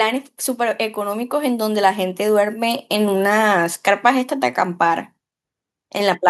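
A speech recording in which the level swells between 0.57 and 2.92 s: voice and background noise grow louder together, smoothly, by about 5 dB over just over two seconds. That joint rise is automatic gain rising. The automatic gain control judged the input too quiet and stepped its gain up gradually, lifting everything reaching the microphone at once rather than the voice alone.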